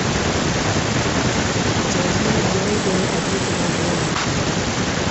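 Speech carrying an echo with no canceller throughout: a quieter, thinner copy trails each phrase by roughly a third of a second, about 24 dB down, visible as faint repeated energy blobs offset along the spectrogram's time axis. The call path's bandwidth ends at 8 kHz, with nothing above on the spectrogram.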